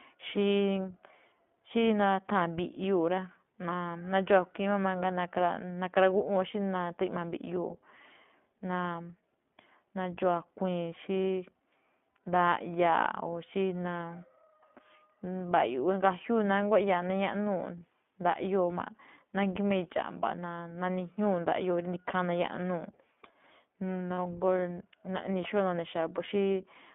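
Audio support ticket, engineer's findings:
iLBC codec, whole clip: speech band-limited to roughly 200 Hz–3.5 kHz, slightly rough, synthetic texture. Spectrogram shows an empty band above 3.5 kHz and a thinned bottom. Narrowband VoIP coding consistent with 20 ms frames, fitting iLBC's 15.2 kbps mode.

Lost iLBC frames at 11.22 s, 24.14–24.19 s and 26.26–26.29 s: brief held, buzzy vowel-like fill. Decoder repeats the last pitch cycle mixed with noise. Waveform shows copied periodic cycles. Speech recovers immediately because iLBC frames decode independently.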